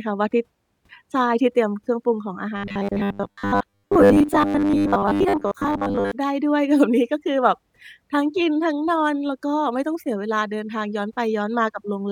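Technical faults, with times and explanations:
2.6 to 6.1 s, robotic sound from repeated short buffers: a rigid, metallic 100 Hz buzz. Most of the audio was likely replaced by a repeating 10 ms chunk.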